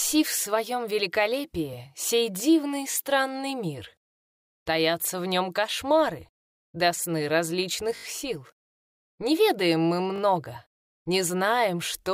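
Repeated buffers at 2.92 s, 7.96–8.04 s and 10.16–10.2 s: late audio made the device replay its last 20 ms block, heard as hard-joined stutters repeating once, four times and twice.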